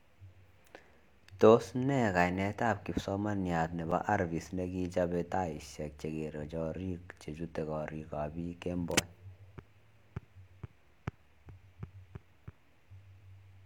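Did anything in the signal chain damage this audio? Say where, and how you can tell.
Yes. At 3.91 s, between "nee kainet ab kipsomaniat" and "arvist nekichope taishek", the speech drops out for about 6.5 ms and returns with no fade, heard as a tick or dip rather than a silence. That is a block of digital silence from the driver or buffer stage. A run of samples went out as zeros, which fits an output buffer that wasn't filled in time.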